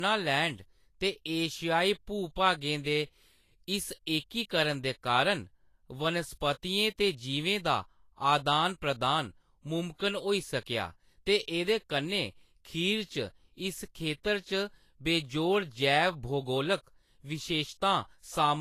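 All the way through, the speech stops dead around 14.2 kHz with that smeary low-bitrate texture, likely low-bitrate audio saved at a high bitrate, so the big file can't restore it.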